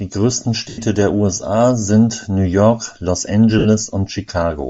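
From the start, the speech has a breathy, grainy edge, and the top of the spectrum sounds thin and hissy. This is likely Bluetooth LC3 compression. At a low rate, which fits about 32 kbps, the codec discards upper detail and fills it with noise.

At 0.69 s, a lost LE Audio frames dropout runs to 0.79 s, about 90 ms. The decoder keeps repeating its last spectrum with scrambled phase. The speech smears into noise and begins fading. That fits nine lost 10 ms frames. A second gap at 3.59 to 3.66 s lasts about 60 ms and sounds the same, only shorter.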